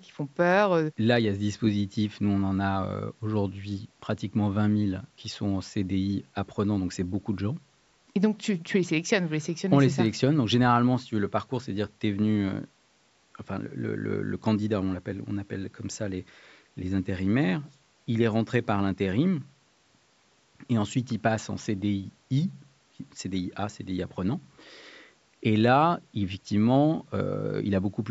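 No technical faults can be heard anywhere in the speech, which passed through call microphone processing with its usual trimming of the lowest bass.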